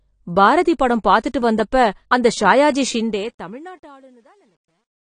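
AAC compression runs through the whole clip. The speech is dull, with nothing above 10 kHz and a plainly audible smeared, fizzy texture on sibilants. The coarse quantisation and lowered cut-off are likely from AAC-LC at a low rate, consistent with about 32 kbps.

Truncation distortion on a fade begins at 2.90 s, just after "அந்த ஷாயாஜி", and runs to the end at 5.17 s. The smooth fade-out, starting around 3 s, is processed without dither at a word length that points to roughly 11 bits. From 3.78 s to 5.18 s the tail turns gritty, the waveform reduced to a few square steps as the level reaches the smallest step.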